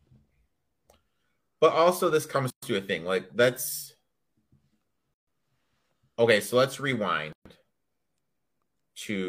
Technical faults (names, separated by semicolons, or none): gap at a join of encoded pieces